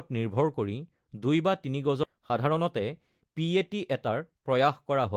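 This is a speech clip with two timing faults. At about 2.03 to 2.05 s the speech abruptly jumps forward with no gap or fill, dropping roughly a second of material so that the audio on either side is butted together. This is a skip ahead: a backlog of audio was waiting, and the receiver threw away about a second of it at once, either in transit or when its jitter buffer overflowed, shortening the delay by about the same amount. From about 2.13 s to 5.10 s the speech then runs quick and slightly hurried while the pitch stays the same, playing at about 108% of normal speed. This is jitter buffer speed-up. The buffer was still holding more audio than its target, so the receiver repeatedly cut out short slices of one or a few pitch periods, removing roughly 300 ms over that stretch to bring the latency back down.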